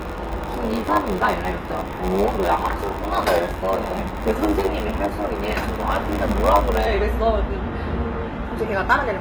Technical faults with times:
0.00-9.21 HE-AAC compression
0.00-6.88 block size mismatch (padded)

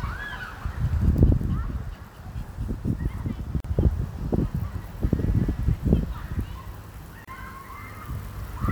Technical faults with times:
3.60-3.64 gap at a join of encoded pieces
7.25-7.28 gap at a join of encoded pieces

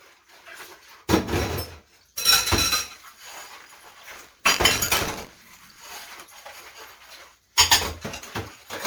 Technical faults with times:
0.00-8.87 generation loss
3.52-6.07 buffer tearing

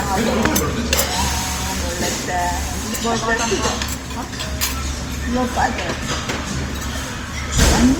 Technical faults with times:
0.00-7.99 low-bitrate audio saved at a high bitrate

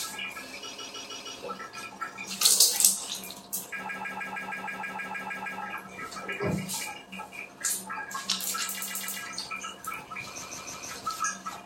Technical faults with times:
0.72-1.35 repeated frames
3.88-5.61 repeated frames
8.79-9.18 repeated frames
10.41-10.88 repeated frames

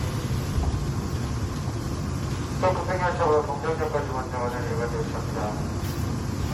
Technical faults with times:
0.00-6.53 generation loss

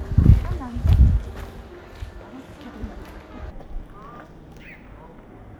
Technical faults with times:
3.51-5.59 stereo read as mono

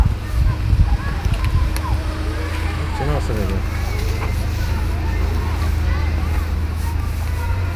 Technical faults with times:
none

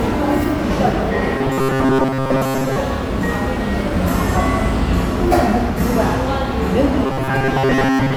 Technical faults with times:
1.38-2.78 robotic sound from repeated short buffers
7.06-8.16 robotic sound from repeated short buffers

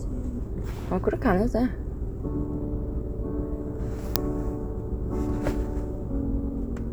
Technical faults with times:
4.16 uninitialised buffer

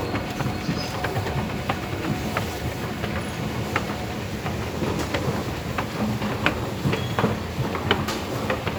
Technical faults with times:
none

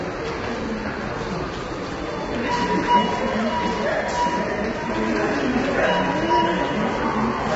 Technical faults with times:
0.00-7.55 low-delay AAC compression

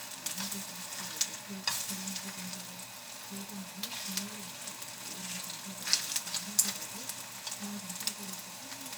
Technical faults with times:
none

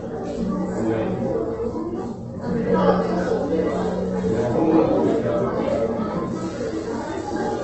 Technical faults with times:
0.00-7.64 Opus compression

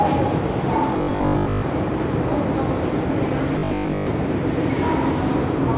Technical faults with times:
0.98-1.64 robotic sound from repeated short buffers
3.59-4.07 robotic sound from repeated short buffers

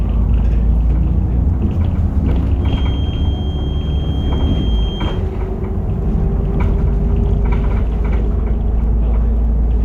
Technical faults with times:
2.58-5.23 feedback whistle

